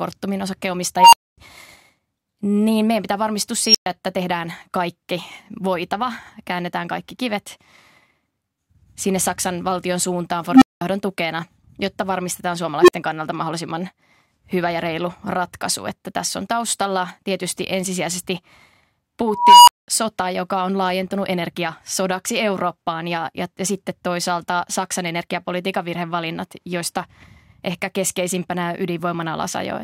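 Speech, broken five times by an unstable filter: at 0.97–1.38 s, 3.64–3.86 s after "niin meidän pitää varmistua", 10.50–10.81 s, 12.81–12.93 s after "tukena jotta varmistetaan", and 19.28–19.88 s before "sota joka on laajentunut". A tone (around 300 Hz to 5 kHz) swells over 73–392 ms, clips, then drops to 52–250 ms of silence as the runaway recursion overflows and resets. Acoustic feedback would build more gradually and not cut to dead silence.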